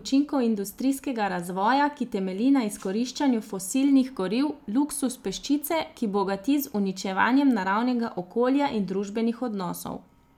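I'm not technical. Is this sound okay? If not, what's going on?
Yes, no faults heard.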